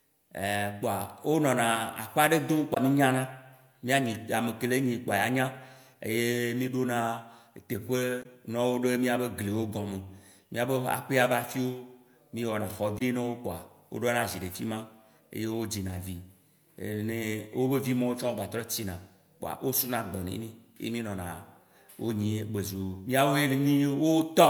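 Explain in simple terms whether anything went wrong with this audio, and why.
Three short glitches interrupt the speech, at 2.71 to 2.78 s, 8.19 to 8.26 s, and 12.95 to 13.01 s. Each lasts about 70 ms. They come from damaged data in a compressed stream. Some stored bytes were wrong, so the decoder misread them, lost its place, and made a brief glitch.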